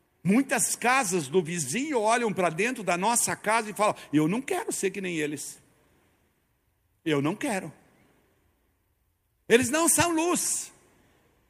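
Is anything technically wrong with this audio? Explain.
No, nothing technically wrong can be heard in this speech recording. The audio holds steady throughout, and there is no fault to point to.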